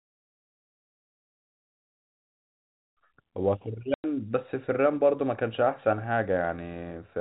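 Speech carried over a G.711 telephone link, so nothing above 4 kHz comes through, and at 3.94 s the audio drops out completely for 100 ms, resuming at 4.04 s with hard edges. This is packet loss filled with silence: packets went missing and the receiver played nothing in their place. The length of the hole fits a short run of lost 20 ms packets, a common size for telephone packet streams.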